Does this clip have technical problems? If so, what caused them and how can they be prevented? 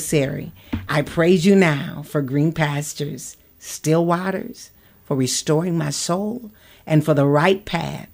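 No, nothing stood out as a technical problem on listening to this speech clip, so there is nothing here that needs preventing.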